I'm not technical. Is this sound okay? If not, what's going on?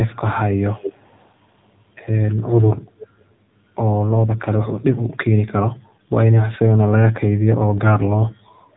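No. For the whole clip, the speech has been squeezed through the AMR narrowband mobile codec used by older phone calls. Nothing above 3.8 kHz survives, and it sounds buzzy and synthetic. A simply muffled recording would dull the sound without that artificial, robotic edge.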